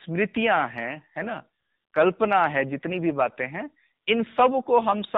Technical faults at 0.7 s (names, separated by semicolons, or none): AMR narrowband mobile codec